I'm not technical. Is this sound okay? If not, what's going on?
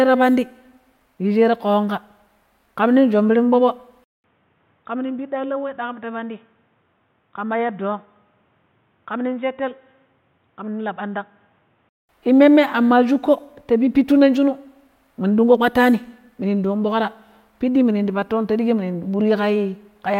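No. From 4.04 to 12.09 s there's an input switched to a poorer device: after a brief 0.2 s gap, the sound turns dull and muffled, with nothing above 3.8 kHz, drops noticeably in volume, and gains a faint new background noise, likely because recording moved to a lower-quality microphone.

At 17.04 to 17.06 s a corrupt frame was decoded: a couple of damaged chunks of the compressed audio were played anyway, putting sound at the wrong pitches and producing a short, loud blip or chirp.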